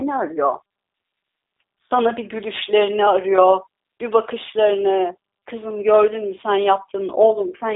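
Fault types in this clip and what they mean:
G.729 codec: The speech is resynthesised from a vocal-tract model, a pitch predictor and sparse pulses, so it sounds plainly gritty and artificial, which fits an 8 kbit/s G.729A stream. On a spectrogram there is a hard ceiling near 3.8 kHz, and the energy sits between 300 Hz and 3.7 kHz.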